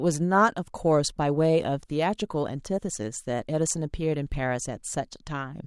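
Nothing here needs fixing: it's a short bit of speech with no technical faults to point to anywhere in it.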